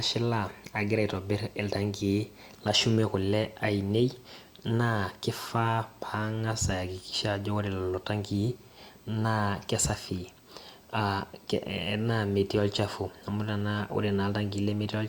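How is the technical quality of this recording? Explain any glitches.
There's one problem running the whole way through the speech: USB whine, a steady fixed-pitch tone at 8 kHz, strongest at 16 kHz, sitting well below the voice. It comes from the bus's 125-microsecond microframe current draw leaking in through power or ground.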